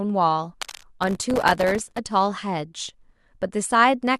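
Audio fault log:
0.61–0.86 s, cable scratch noise: Uneven scratchy rustling sits roughly 15 dB below the speech. A worn cable or connector being moved is the likely cause.
1.03–1.99 s, processor overload crackle: Many tiny silent gaps arrive in a row, giving gritty crackle. Their length fits very short buffers, around a millisecond or two, missing deadlines.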